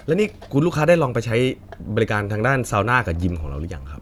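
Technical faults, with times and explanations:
No technical faults can be heard in this speech clip. Nothing in the audio calls for a time or an explanation.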